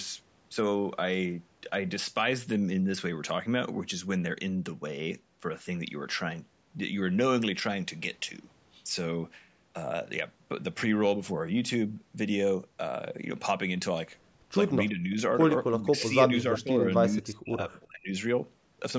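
A speech recording sent through call microphone processing, with nothing above 8 kHz. Between 14.9 and 18.17 s the voice repeatedly sinks or drops out: a mild dip at 14.9–15.18 s, a deep gap at 15.78–15.92 s, a moderate dip at 16.43–16.78 s, and a near-silent stretch of about a second at 17.13–18.17 s. This is likely speech suppressed in double talk, where the echo canceller, unable to separate this talker from loudspeaker echo while both sides spoke, turned everything down. Inside that last gap, at 17.81–17.87 s, a brief, very faint copy of the voice played on the loudspeaker appears about 342 ms late, likely an echo leak from a speakerphone whose canceller let some of its microphone pickup back through.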